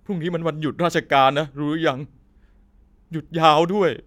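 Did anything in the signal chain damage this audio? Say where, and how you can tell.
No, nothing along the chain seems to have harmed this speech, and there's no stage I'd point a finger at here.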